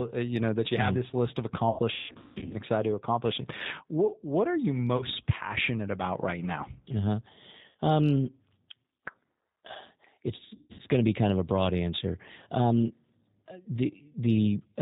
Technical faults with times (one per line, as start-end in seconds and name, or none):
0.00-14.82 G.729 codec
1.70-2.56 VoIP packet loss concealed by the speech codec
4.97-5.04 VoIP packet loss concealed by the speech codec
7.69-7.77 VoIP packet loss concealed by the speech codec
10.55-10.81 VoIP packet loss concealed by the speech codec